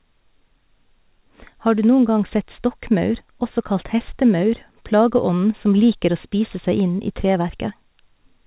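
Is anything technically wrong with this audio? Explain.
No, nothing is technically wrong.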